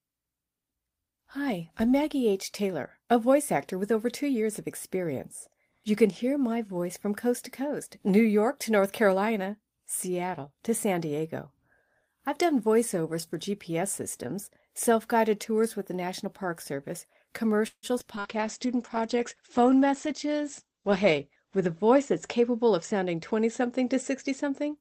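The audio breaks up from 17.67 to 18.27 s with repeated packet loss, giving a robotic sound. Four holes fall in that 0.6 s span, the longest 154 ms. Each is patched by stretching the previous sound, so about a third is filled-in material. From 18.18 s to the end, a call bitrate drop takes over. The top end collapses from 20 kHz to about 8 kHz, and the sound turns coarse and muffled. This fits the encoder falling from about 32 kbps to 11 kbps and staying at its lowest for about 3.4 s.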